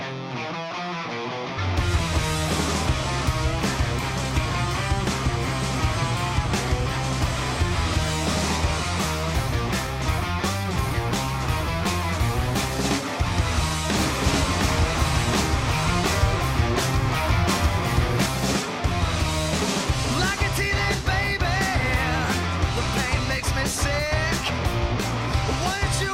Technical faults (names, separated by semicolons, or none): skip ahead; doubled audio track